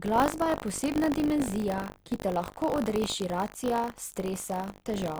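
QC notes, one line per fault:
throughout: buffer tearing. A steady robotic buzz at 50 Hz rides along whenever there's signal, which fits a 20 ms buffer period. Writer and reader have slipped, so a small slice of each period, a few percent, replays audio from roughly 70 ms earlier, with hard joins either side.
0.99 s to 5.2 s: adaptive stream at a lower bitrate. Quality drops suddenly with no gap and stays down to the end. Codec artefacts climb, which points to a switch from around 64 to 24 kbit/s Opus after the connection slowed.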